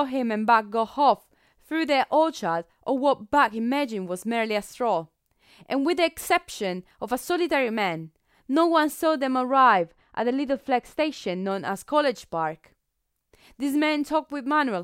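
From about 9.51 to 11.51 s the speech goes dull and muffled: that's de-emphasis applied wrongly. A treble cut meant to reverse pre-emphasis landed on audio that didn't need it, so the top slopes away smoothly, about 11 dB down at 10 kHz versus 1 kHz.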